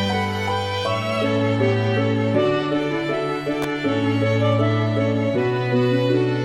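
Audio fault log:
3.62 s, electrical switching spike: a sharp snap sits on top of the music, peaking at about -10 dBFS, likely an arc from a nearby switch or motor coupling into the line. The waveform shows a narrow spike; the spectrogram shows a thin full-height vertical stripe.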